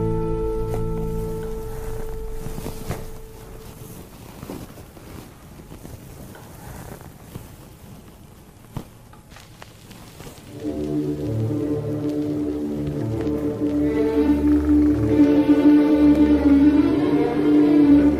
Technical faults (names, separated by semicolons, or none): block of digital silence